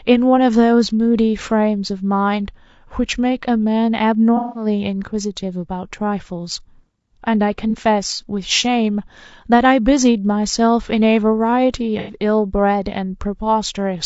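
From the start the speech sounds rough and grainy, with a hiss filling the gaps between harmonics and a thin, synthetic top end. This is likely low-delay AAC compression such as AAC-ELD, whose short frames resolve pitch poorly; the damage fits a bitrate near 32 kbps.

At 4.37 to 4.66 s, 7.70 to 7.75 s, and 11.99 to 12.15 s, brief smeared, noisy, phasey patches replace the speech. This is AAC frame loss with concealment: the decoder rebuilds missing audio from the last good spectrum. The patches point to roughly 180, 30 and 90 ms of lost data.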